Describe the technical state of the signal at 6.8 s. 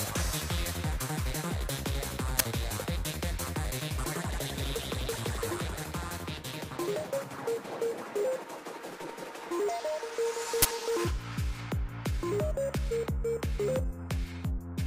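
At 6.8 s the signal is intact, with no audible fault at that point.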